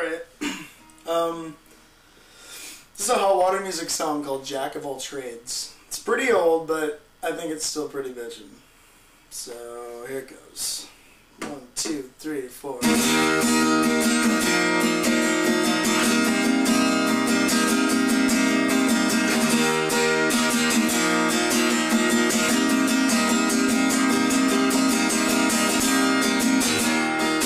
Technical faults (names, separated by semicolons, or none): compressed frames skipped